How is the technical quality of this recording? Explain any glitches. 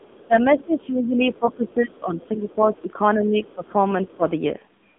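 Technical quality is poor: heavy mobile-codec damage throughout, plus echo and level dips from the call's echo handling.

AMR narrowband mobile codec, throughout: the speech is squeezed through 8 kHz telephone coding, with nothing above 3.8 kHz. It sounds buzzy and synthetic, which fits a very low bitrate near 6.7 kbps.

Other side's voice leaking through, at 0.00–0.26, 1.34–1.70, 2.21–2.27 and 3.47–3.53 s: faint second-voice scraps sit roughly 30 to 35 dB below the speech, likely loudspeaker echo the canceller missed.

Speech suppressed in double talk, at 0.57–2.91, 3.15–3.75 and 4.08–4.26 s: the talker's level drops by up to around 15 dB, likely the echo canceller ducking during overlap.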